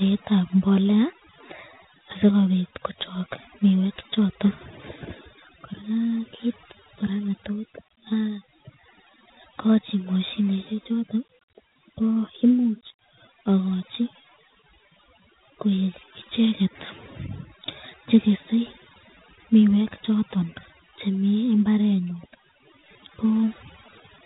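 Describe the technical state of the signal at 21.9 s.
At 21.9 s, as throughout, overdone noise removal has pushed bands near the noise floor down to near silence, leaving twinkling specks rather than steady hiss. Dialogic VOX ADPCM is also present, with nothing above 3.8 kHz and a plainly audible gritty hiss riding on the speech, consistent with 4-bit coding around 32 kbps.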